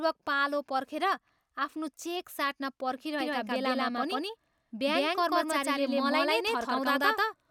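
A speech clip with a doubled audio track from 3.2 s to the end. A second full-band copy sits about 150 ms behind, at roughly the same level. It has no decay or room colour and starts abruptly. A slower capture path likely recorded it twice.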